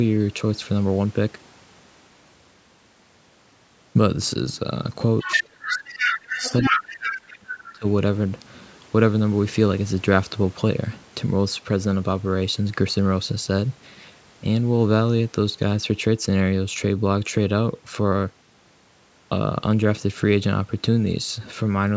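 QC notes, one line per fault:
5.19–5.42 s, 5.68–6.19 s, 6.35–6.84 s, 7.05–7.16 s and 7.64–7.72 s, other side's voice leaking through: a second voice sneaks in over the talker. In the first three scraps it's about as loud as the talker, then it drops to roughly 10 dB and 20 dB down in the last two short bits. Most likely the far end playing on a loudspeaker and the echo canceller not fully scrubbing it from the mic.
5.23–6.44 s and 6.69–7.85 s, speech suppressed in double talk: right where that other voice overlaps, the talker gets pushed way down, by as much as about 35 dB in the first stretch and about 30 dB in the second, with around a second of each span affected. It's likely the echo canceller again, unable to tell the near talker from the echo while both are going, so it ducks the whole lot and the speech dips and drops out in pieces.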